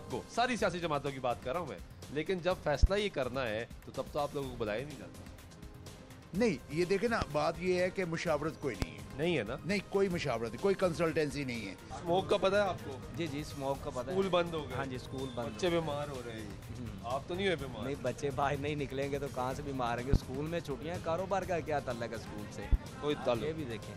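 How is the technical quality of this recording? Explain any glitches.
The recording is marred by five loud pops, at 2.83, 7.22, 8.82, 20.13 and 22.73 s. Each is a single sharp thump of about 0.04 s, roughly 20 dB above the surrounding sound (about 25 dB for the first), likely from a plug, switch or static discharge. Unlike a dropout, the sound continues underneath each pop.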